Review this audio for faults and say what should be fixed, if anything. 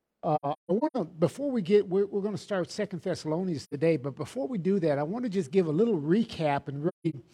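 AAC frame loss with muting at 0.35–0.97 s, 3.63–3.74 s and 6.88–7.14 s: the decoder zeroed the spectrum of missing frames, so the sound fades out and back in through the overlapping windows, leaving soft-edged holes. The first gap scatters 384 ms of silence across about 0.6 s, its longest stretch about 150 ms; the second loses 85 ms, which points to two frames; the third drops 213 ms over 256 ms. Prevent it by adding forward error correction or retransmission on the transport carrying the AAC stream.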